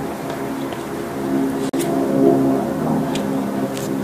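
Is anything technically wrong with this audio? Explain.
Yes. At 1.69 to 1.74 s there is a gap between stream segments: two segments' timestamps didn't meet, so the player filled about 41 ms with silence. The hole has hard edges, but unlike a dropout no audio is missing; the sound resumes exactly where it stopped.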